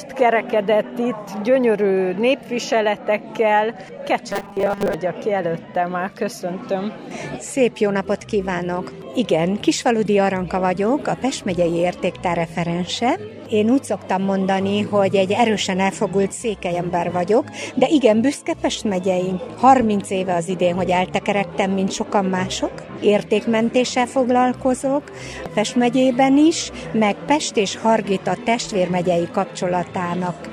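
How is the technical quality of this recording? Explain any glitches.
One glitch stands out: robotic sound from repeated short buffers, from 4.30 to 4.95 s. New audio likely arrived too seldom, so playback kept re-sending the last few milliseconds while the real signal was skipped. The 200 Hz buzz fits a 5 ms buffer. For that stretch, most of the sound becomes a rigid, metallic buzz that follows the original only loosely.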